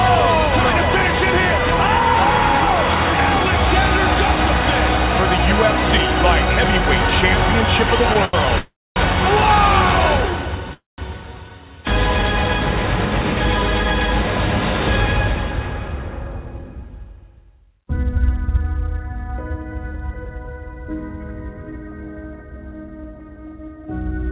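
At 8.25 s a sound is held too long. This is a short stall from a late packet. A packet was not ready when it was due, and the jitter buffer ran dry. The receiver stretched the last sound for 85 ms until the packet arrived, then carried on from the same point. Nothing is lost. The held sound is drawn out, and everything after it runs 85 ms later.

From 8.58 s to 8.98 s there is a call audio freeze. The last sound is continued and fades, then 240 ms of silence. About 380 ms is filled in all, and the audio resumes where it stopped. A second freeze runs from 10.73 s to 11.00 s. It fills 246 ms, with 170 ms of silence, and again nothing is missing. The likely cause of both is packets held up on the network while the buffer emptied.

From 16.46 s to 18.56 s the audio runs slightly fast. This is a jitter buffer speed-up. The buffer held more audio than its target. To cut the extra delay, the receiver removed many tiny pieces, each a pitch period or so long. 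About 70 ms was taken out over that stretch. Playback runs at 104 percent with no change in pitch.

The audio passes through a G.711 mu-law call path at 64 kbps, and nothing is present above 4 kHz.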